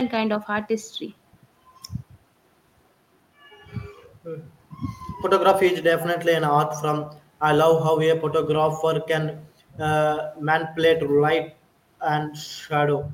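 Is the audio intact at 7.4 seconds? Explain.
Yes, the speech at 7.4 seconds plays through intact, with no audible fault at that moment.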